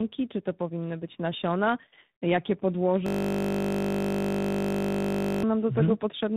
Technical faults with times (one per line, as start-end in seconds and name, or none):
0.00-6.37 tandem speech coding
3.06-5.43 system hang loop